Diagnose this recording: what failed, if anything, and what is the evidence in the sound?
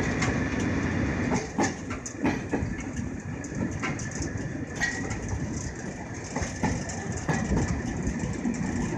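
Nothing in the recording points to a failure at any stage of the chain. No event can be heard that would call for a diagnosis.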